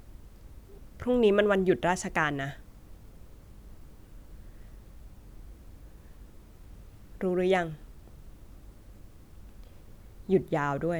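Speech, with nothing technically wrong to report.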